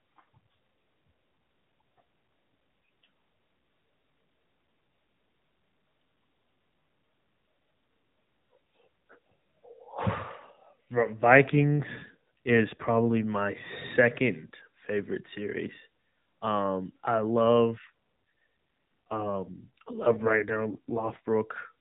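From 11.48 to 13.27 s, just before "second favorite series", and again from 17.42 to 21.35 s, an AMR rate drop makes the speech rougher and more synthetic. The sound fits the narrowband codec falling from 12.2 to 5.9 kbps, with no gap and no change in bandwidth.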